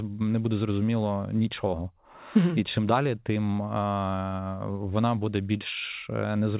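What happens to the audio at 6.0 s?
Nothing goes wrong at 6.0 s: the speech carries on intact through the call path, with the narrowband sound of a G.711 mu-law phone codec that leaves nothing above 4 kHz.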